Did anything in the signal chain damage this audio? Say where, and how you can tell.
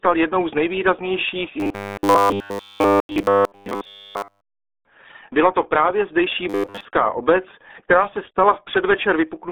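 Yes. At the codec stage, the whole clip has been through the RealAudio 14.4 codec. The speech sits in a narrow 300 Hz to 3.6 kHz band with nothing above 4 kHz, and it sounds heavily muffled and gargly. That fits an 8 kbit/s dial-up codec.

At the driver or buffer stage, there is robotic sound from repeated short buffers. From 1.60 to 4.61 s, right after "jednou z nejvýraznějších", essentially all of the audio becomes a rigid metallic buzz at 100 Hz. The same buzz returns from 6.50 to 6.85 s, between "to právě zdejší" and "obec která se", where most of the audio is replaced. The likely cause is starved playback repeating its last 10 ms block, which imposes a fixed 100 Hz buzz while the real audio is skipped.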